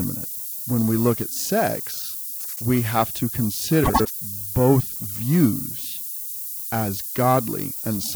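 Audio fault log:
Throughout: low bit depth with noise shaping. A thin, steady hiss sits about 10 dB below the speech and climbs sharply toward the top of the band. The coarse rounding suggests roughly 6-bit quantisation, with the error pushed upward by feedback. Pauses never go clean.
Throughout: periodic clock jitter. The speech carries a rough, metallic edge that drops away in silence. A clock wobbling at around 1 kHz spreads sidebands either side of each component at that spacing. Brighter, higher sounds take the harshest grain.
2.40–2.62 s and 3.83–4.11 s: frames out of order. After "we look at sex", and again after "have to", short stretches flutter and garble. Pairs of neighbouring 78.4 ms and 104.5 ms blocks play in swapped order. This fits runs of three and four frames. No time is lost.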